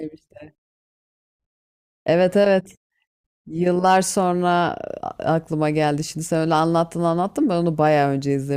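Nothing goes wrong technically anywhere in this stretch of speech, so there's no fault to point to at any moment.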